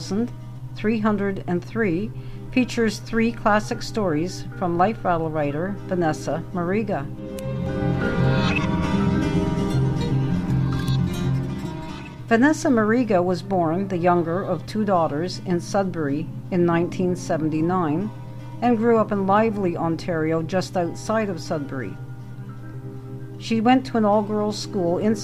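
No technical faults are audible anywhere in the recording.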